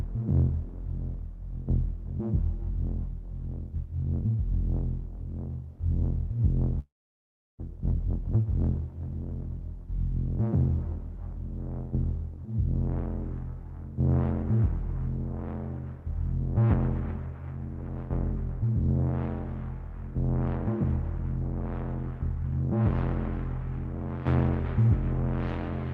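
From 6.79 to 7.61 s, a long network dropout likely cut the stream: the last sound fades briefly, then about 0.7 s of silence, and audio resumes with that stretch missing.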